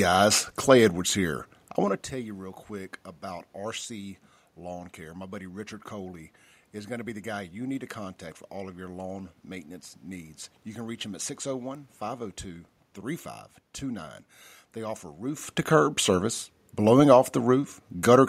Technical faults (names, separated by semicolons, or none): none